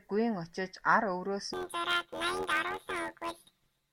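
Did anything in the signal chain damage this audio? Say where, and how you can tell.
Yes. From 1.53 s on, speech buzzes robotically at 86 Hz. That is planar audio read as interleaved in sample-format conversion, fitting 11.6 ms, 512-sample blocks.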